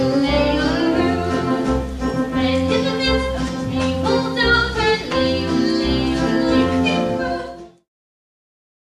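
Nothing stood out on listening, and the audio simply fades out smoothly from around six and a half seconds to 7.9 s, as an editor would finish a clip.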